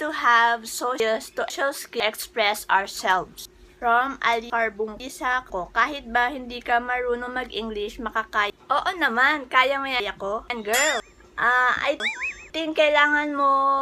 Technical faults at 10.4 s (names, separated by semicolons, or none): chunks out of order